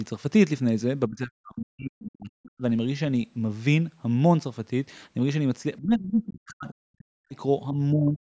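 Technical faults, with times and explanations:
1.09–2.63 s, 5.79–7.34 s and 7.72–8.21 s, speech suppressed in double talk: the speech drops out almost entirely in the first two stretches and dips less in the last, likely because the echo canceller turned everything down while both sides were talking.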